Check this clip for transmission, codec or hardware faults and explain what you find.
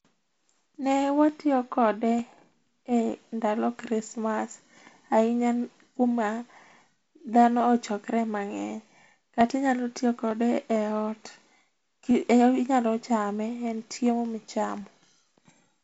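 There's one fault here, a steady run of clicks through the speech, and it's most likely clock drift buffer slips. From 0.39 s to 15.72 s you get a small tick about every 0.90 s, some twenty in all. That pattern fits two devices whose clocks disagree by a few hundred ppm, so the buffer between them drifts until a small block, around fifteen samples, gets dropped or repeated. The wideband telephone coding underneath sounds like G.722 at a reduced rate, with a faint hiss and nothing above about 7.7 kHz.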